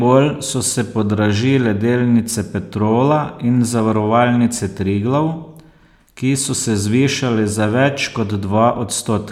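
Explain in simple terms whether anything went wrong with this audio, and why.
Nothing went wrong; no problems can be heard anywhere.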